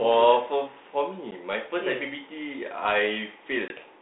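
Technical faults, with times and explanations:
1.31 s and 3.68–3.72 s, packet loss on an ADPCM call: a stretch of the 32 kbit/s G.726 stream went missing and was filled with silence, about 10 ms at 1.31 s (roughly one packet) and about 20 ms around 3.7 s (a couple of packets). Each gap cuts the speech with abrupt edges. Because the decoder's adaptive predictor and step size drift from the sender's while data is missing, the audio resumes slightly distorted, then recovers within tens of milliseconds.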